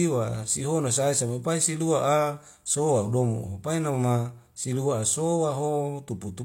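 At 0.35 s, just before "sihono sae sae mai", a sharp snap sits on top of the speech. This is an electrical switching spike, most likely a brief arc from a nearby switch, motor or static discharge that the audio line picked up.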